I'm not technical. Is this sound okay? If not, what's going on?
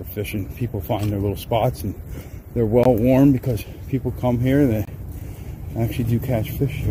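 No. There is a gap between stream segments at 2.84 to 2.86 s and again at 4.85 to 4.88 s, two brief silent holes about 20 and 24 ms long. The audio arrives in 2-second pieces, and where two pieces don't quite meet, the player fills the space with silence. Nothing is lost.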